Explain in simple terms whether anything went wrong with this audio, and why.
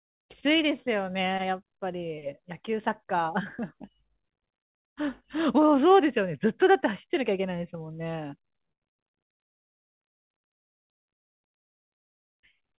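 Twice in quick succession, at 8.72 to 8.83 s and again at 8.89 to 9.02 s, the speech seems to catch and hang, one sound drawn out for roughly a tenth of a second with a faint buzz or dip before it carries on. Each is a short stall from a late packet: a piece of the call arrived late, so the receiver stretched the last bit of sound to cover the wait, then picked up exactly where it left off. Nothing is lost, just delayed.

From 10.67 to 10.89 s the speech stops and the line goes quiet for about a fifth of a second, then resumes mid-flow. That is a call audio freeze, likely caused by packets being held up on the way, so the receiver had nothing to play and filled the wait with silence. When they arrived, playback continued from the same point, so a pause was added rather than anything cut out. All of this rides on a narrow, telephone-like sound, with nothing above 4 kHz, typical of this kind of call line.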